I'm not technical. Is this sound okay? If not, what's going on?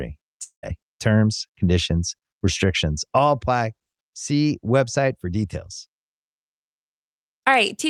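No. There is a long network dropout from 0.43 to 0.65 s. For about a fifth of a second the speech gives way to a fading buzz or hiss, then briefly goes quiet before it resumes. This is likely caused by the connection stalling so that no audio arrived. The receiving end stretched the last bit of sound to cover the gap, and when the audio returned, roughly 0.2 s of speech had been lost for good.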